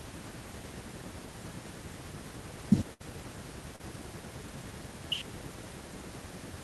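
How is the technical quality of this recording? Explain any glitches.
The recording has two brief dropouts in the speech, both from audio that arrived too late or not at all.

From 2.93 to 3.02 s the sound turns into a held, fading continuation of the last sound before the speech jumps ahead. That is a burst of packet loss: about 60 ms went missing, and the receiver stretched the last sound across roughly 64 ms, lowering it as the gap continued.

From 3.76 to 3.81 s a quick smear passes over the speech. This is short concealed packet loss: about 40 ms never reached the decoder in time, so around 34 ms was rebuilt from the preceding sound and then blended back into the real signal.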